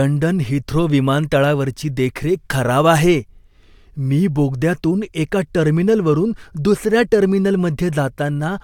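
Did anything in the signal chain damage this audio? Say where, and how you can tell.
No, nothing in the signal chain has left audible damage on this speech recording, and the signal holds steady and continuous throughout.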